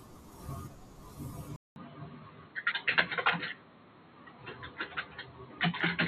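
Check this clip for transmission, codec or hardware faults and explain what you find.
One fault: input switched to a poorer device, from 1.56 s to the end, likely a change to a narrower microphone path. After a 200 ms silence the speech turns dull, with nothing above 4.2 kHz, a faint new noise floor, and unchanged level.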